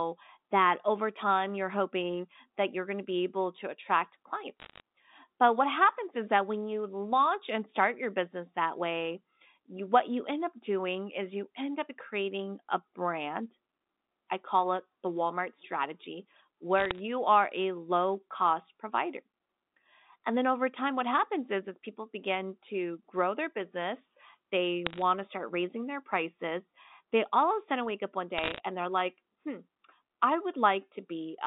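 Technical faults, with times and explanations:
4.6–4.8 s, 16.78–16.99 s, 24.87–25.02 s and 28.38–28.6 s, bit errors on a digital phone line: short bursts of sharp ticks and crackle follow "be able to attract", come just before "are a low cost", and sit between "sudden wake up one" and "and they're like hmm". Each flipped bit, at a rate of under one percent, corrupts a single sample of the 8-bit logarithmic G.711 stream. Hits on the sign or high bits leave lone spikes in the waveform and thin full-band vertical lines on a spectrogram, capped at the 4 kHz limit of the 8,000-sample stream.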